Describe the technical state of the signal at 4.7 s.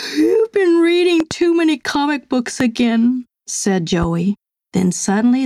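At 4.7 s the signal shows gain pumping, which runs through the whole clip rather than a single moment. The likely cause is input gain set far too high, with a fast limiter or compressor clamping down on each loud sound. The gain swings by roughly 10 dB, leaving a squashed sound. On a waveform the peaks look flattened to one ceiling.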